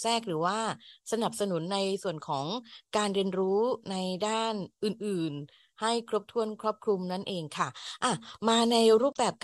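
No technical faults are audible.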